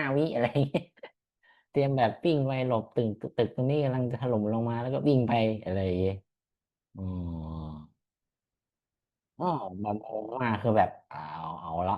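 No faults are audible anywhere in the recording; level, timing and continuity hold steady throughout.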